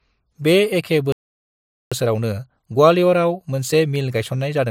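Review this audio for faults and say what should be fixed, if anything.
A playback stall silences the speech from 1.12 to 1.92 s, right after "बे एखे". The gap lasts about 0.79 s. The player likely ran out of data or was blocked.

Time-compressed catch-up follows from 1.92 s to the end. The speech runs about 1.15 times fast at normal pitch. Small pieces are cut and cross-faded.

A larger playback buffer and a playback thread that other work cannot block would prevent the stall, and with it the need to catch up.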